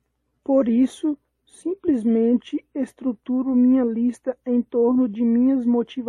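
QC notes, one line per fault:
No fault to note.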